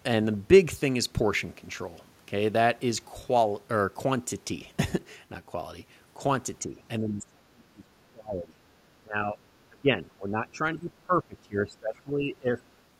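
A speech recording whose level sinks in stretches: briefly and slightly at 6.66–6.79 s, heavily (about 35 dB) from 6.99 to 8.6 s, then about 20 dB at 9.01–9.37 s and 9.69–12.76 s. This is likely speech suppressed in double talk, where an echo canceller mistook overlapping talk for echo and ducked it.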